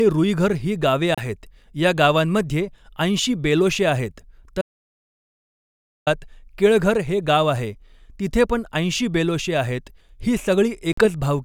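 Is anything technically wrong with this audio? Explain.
Yes. The speech breaks up three times.

A Bluetooth dropout, the likely cause of two short holes, occurs at 1.15 to 1.26 s and again at 10.93 to 11.07 s. When audio packets miss their delivery window to the headphones, they are discarded and the output goes silent until good ones arrive. Each hole has abrupt edges or a fade of a few milliseconds, and the speech resumes further along, as though it had kept playing. About 30 ms and 46 ms of material are lost, which fits two and three dropped packets.

An audio dropout to silence, likely from the input being lost, runs from 4.61 to 6.07 s, about 1.45 s. With the source gone, the recorder kept writing silence, so this gap is silent with no room tone. The speech is cut off, and whatever was said in between is gone.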